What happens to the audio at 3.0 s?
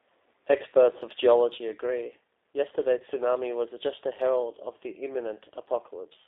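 Right around 2.98 to 3.03 s there's a VoIP packet loss concealed by the speech codec. About 20 ms of audio, which fits a single dropped packet, never arrived, so the decoder kept going on its last pitch and filter settings while turning the gain down. You hear the sound smear into a short stretched-out sound that sags in level, and it stays a bit weak and off for a few tens of milliseconds after real data resumes, because each frame rebuilds from the one before.

That blip sits inside a sudden gain jump that began back at 1.58 s and carries on to the end. The whole level, background included, dropped by about 5 dB in one step with no fade. That's most likely a gain setting or bit shift applied abruptly, so at 3.0 s everything is already sitting about 5 dB quieter than it did in the opening stretch.

Underneath both, the G.729 codec is at work the whole way through, running at 8 kbit/s over a line band of roughly 250 Hz to 3.7 kHz. 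It rebuilds the speech from a vocal tract model, a pitch predictor and a handful of pulses per frame, so the damage is plainly audible. The sound comes across thin, slightly rough and synthetic, and the concealment at 3.0 s lands on top of that already coarse texture.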